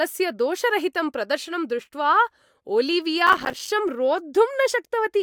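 From 3.27 s to 3.70 s the processor falls behind and cannot fill its small audio buffers in time. Buffers of around 5 ms miss their deadlines one after another, a few dozen of them, and each miss is filled with silence. These short dropouts with abrupt edges stack up into a burst of processor overload crackle, a gritty tearing laid over the speech, which stops once the load eases.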